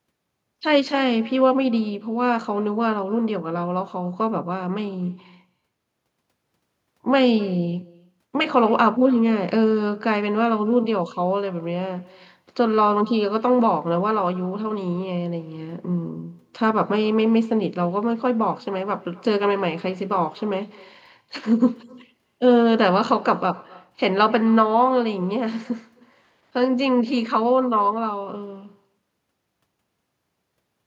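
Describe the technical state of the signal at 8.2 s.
At 8.2 s the speech carries echo with no canceller, present throughout the clip: the far end's loudspeaker feeds its microphone, returning a thinner copy about 24 dB down, roughly a third of a second late. A spectrogram shows faint repeats trailing each syllable.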